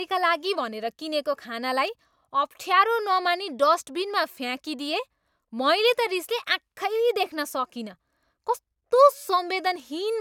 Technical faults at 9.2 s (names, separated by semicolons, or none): none